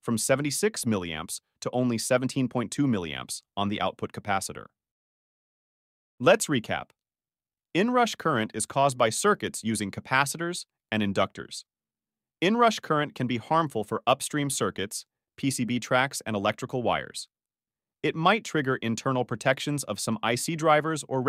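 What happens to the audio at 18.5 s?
At 18.5 s the audio plays through intact, with no dropout, click, distortion or other fault.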